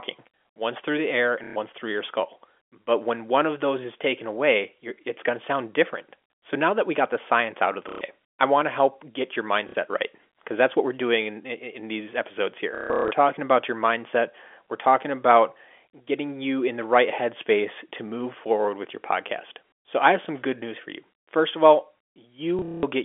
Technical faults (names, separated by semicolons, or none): packet loss with last packet repeated